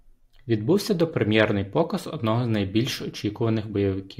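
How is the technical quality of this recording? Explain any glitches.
Listening closely, nothing in the recording stood out as a technical problem, so there are no glitches to explain.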